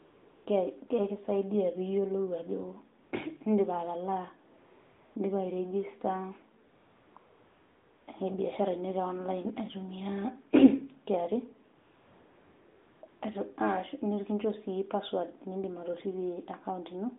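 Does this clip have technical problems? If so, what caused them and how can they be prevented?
Yes. AMR comfort noise fills the gaps at 0.0–0.46 s, 3.04–3.12 s, 4.58–5.16 s, 6.66–7.16 s, 7.18–8.08 s, 11.76–13.02 s and 13.08–13.22 s. In each, the phone judged the talker silent and stopped sending speech frames, so the receiver generated a smooth, steady hiss from a coarse sketch of the background. Unlike a dropout or noise gate, which leaves true silence, these pauses hold an even, featureless noise that switches on and off against the narrowband mobile sound around it. Disabling discontinuous transmission on the sending device keeps the real background in the pauses.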